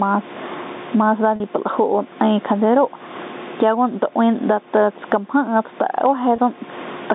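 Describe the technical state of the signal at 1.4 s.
At 1.36 to 1.40 s there is packet loss with pitch repetition: about 40 ms of audio, which fits two 20 ms packets, goes missing, and the receiver fills the hole by looping the last pitch period of the speech. Because the gap is short, it comes across as a brief held, buzzy tone rather than a fade to silence. That steady periodic buzz is what separates it from a plain dropout, which would leave a click or a hole, and from a codec glitch, which smears noise instead of repeating a cycle.

Around that moment the gain pumping heard throughout is also present: the level rises and falls by roughly 20 dB. This is likely caused by a fast limiter or compressor working against gain set far too high. Unlike a slow automatic level drift, the ducking follows each loud sound closely, so the concealed segment sits inside a squashed, breathing level rather than at a constant one.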